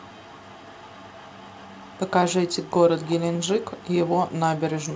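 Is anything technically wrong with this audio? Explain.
Yes. An echo leak, likely from a far-end echo canceller failing to remove loudspeaker pickup, returns a copy of the speech 377 ms late, very faint from 0.0 to 2.1 s and louder from 3.0 to 3.16 s.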